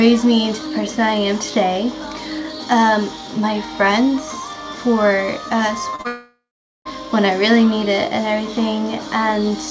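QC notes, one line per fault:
5.90 to 6.07 s, short concealed packet loss, three in a row (5.90–5.96, 5.96–6.02, 6.02–6.07): each time roughly 30 ms of the call failed to arrive, and the receiver patched it by stretching the preceding sound, so you get a quick smeary wobble stacked three deep.
6.07 to 6.88 s, long network dropout: the audio cuts out and gets extended as a fading buzz or hiss before going quiet, with about 0.42 s of near-silence before sound returns. The likely cause is a network stall of roughly 0.8 s, and that stretch never gets played.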